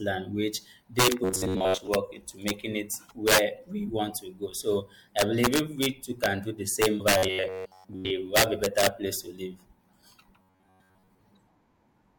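Speech with integer overflow throughout: peaks pushed about 7 dB past full scale wrap to the opposite sign, giving harsh cracks and, on the waveform, spikes jumping rail to rail. Between 1.24 and 1.88 s (after "land which they"), 7.18 and 8.10 s, and 10.40 and 11.18 s, a rigid metallic buzz at 93.8 Hz appears. It is likely robotic sound from repeated short buffers, with segments of about 10.7 ms looping, and it shows as evenly spaced vertical striations on a spectrogram. At 6.99 s, after "too can do the", compressed frames are skipped: roughly 150 ms vanishes in 26.1 ms frame steps, leaving a smeared blip at the join.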